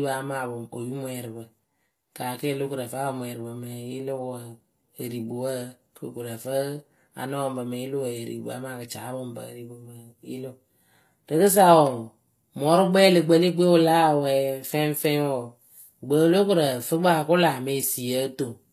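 From start to finish the speech carries a gritty, metallic treble, with s sounds coming out lispy, which points to HE-AAC compression as the likely cause, at a low rate that fits roughly 24 kbps. The lower spectrum is coded directly, while the top is rebuilt by copying lower bands upward, so its harmonics fail to line up. On a spectrogram the upper region shows blocky, repeated patterns above a clear crossover edge.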